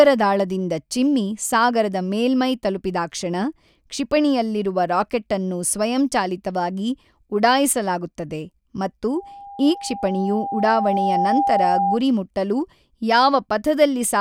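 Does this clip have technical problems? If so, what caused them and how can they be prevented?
Yes. From 9.15 to 12.0 s, right after "ರಾಕೆಟ್ಟನ್ನು ಸ್ವಯಂಚಾಲಿತವಾಗಿ ಉಢಾಯಿಸಲಾಗುತ್ತದೆ ಮತ್ತು", there is loudspeaker feedback squeal. The microphone picked up its own loudspeaker, and an 801 Hz tone grew over about two seconds to roughly the speech level. Lowering gain, repositioning the microphone, or notching 801 Hz prevents it.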